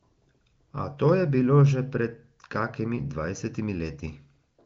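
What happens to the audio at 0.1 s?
Nothing goes wrong at 0.1 s: the audio is intact there, carried cleanly through the AMR wideband (HD Voice) codec, which at about 18 kbit/s leaves little or no audible coding damage and simply stops short of 7.5 kHz.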